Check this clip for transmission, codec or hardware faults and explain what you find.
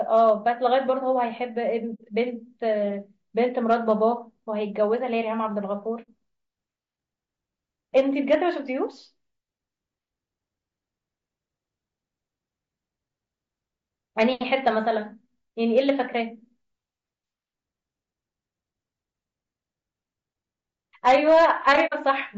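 Three faults run through this speech clip: constant codec roughness, repeated bursts of hard clipping on loud passages, and three short muted gaps.

The whole clip is grainy and rough, with a hiss-like fill between the harmonics of the voice and a thin, artificial-sounding top band. The likely cause is low-delay AAC compression of the AAC-ELD kind. Its short frames split the harmonics of the voice poorly, and at a rate that sounds like about 32 kbps there are too few bits left to code them cleanly. Broadband hiss would sit evenly under the voice. This fill changes with the voice and sits between its harmonics.

Hard clipping appears at 0.15 to 0.30 s, 3.71 to 3.92 s, 7.97 to 8.35 s, 15.78 to 15.90 s and 21.07 to 22.09 s. The peaks exceed the level a stage can pass by about 1 to 5 dB, so their tops are cut flat. The flat tops add high harmonics. The first burst, about 1 dB over, is brief crackle. 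The last, about 5 dB over and lasting over a second, becomes a harsh fuzz. Codec roughness is present everywhere, but this distortion rises only with loudness.

AAC frame loss with muting causes gaps of about 60 ms at 1.94 s, 6.02 s and 21.86 s, which points to two lost frames each time. The decoder sets the missing spectrum to zero, and the overlapping windows fade the sound out and back in. The result is a soft-edged hole. A raw sample dropout would begin and end abruptly. The last gap falls inside the final clipped burst.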